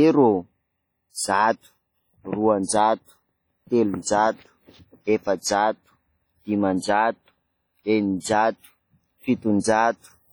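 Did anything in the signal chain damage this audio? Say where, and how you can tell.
Yes. The damage is at the codec stage and runs through the whole speech clip. There is heavy ringing and a washy smear, with hiss that swells and fades with the speech. This is likely WMA compression at a low bitrate, around 32 kbps. Its long transform blocks spread quantisation noise over tens of milliseconds, and weak spectral lines are zeroed even though content reaches about 20.1 kHz.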